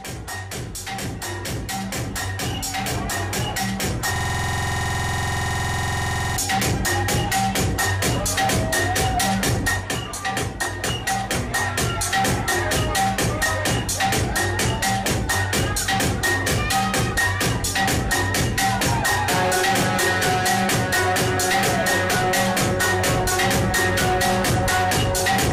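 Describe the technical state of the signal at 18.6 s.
At 18.6 s the signal is intact, with no dropout, distortion, glitch or other technical fault audible at that moment.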